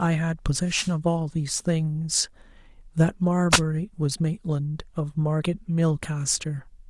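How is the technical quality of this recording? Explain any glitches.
Two brief dropouts from a wireless microphone affect the recording. The wireless microphone noise hits, at 0.67 to 0.93 s and again at 3.51 to 3.60 s, are radio fades: reflected copies of the FM signal arrive out of step and partly cancel, so the receiver loses carrier strength and its own hiss rises into the audio. Each is heard as a quick swish of static laid over the speech, the first lasting about a quarter of a second, the second under a tenth.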